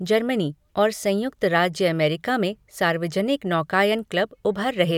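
No technical faults can be heard anywhere in this speech.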